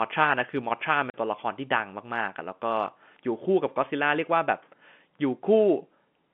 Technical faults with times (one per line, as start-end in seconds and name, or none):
1.10-1.14 packet loss filled with silence